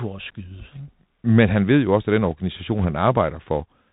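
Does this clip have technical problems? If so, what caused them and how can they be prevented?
Yes. The speech was carried over a Bluetooth CVSD headset codec, the narrowband link that sends one bit per sample to say whether the waveform should step up or down, with the step size adapting as it goes. This cuts off everything above 4 kHz, so the sound is muffled and telephone-like. Loud, bright sounds rise faster than the step can follow and distort, sibilants turn scratchy, and a fine granular hiss sits under the speech throughout. The damage is plainly audible and fits a 64 kbps headset link. To prevent it, use a wideband headset profile (mSBC or LC3) or a wired microphone instead of the narrowband CVSD mode.

From 2.78 to 2.85 s, bit errors on the Bluetooth voice link flipped some of the transmitted up/down bits. The error rate points to roughly one or two percent. Each CVSD bit moves the waveform by only a small step, and the decoder's adaptation lets a wrong step fade out, so there are no sharp clicks. 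Instead, this short stretch gets a rushing, crackly noise laid over the speech. To prevent it, keep the headset close to the host device, away from interference and obstructions, so the radio link stays clean.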